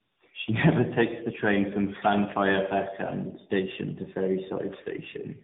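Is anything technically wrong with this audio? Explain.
Yes. Throughout the speech there is tandem speech coding: it sounds like three speech codecs in a row, likely a CVSD stage and two AMR-NB passes. Each re-encodes the previous one's errors, leaving rough, muffled, warbly speech. A spectrogram shows nothing above 3.8 kHz and smeared, wobbling formant bands.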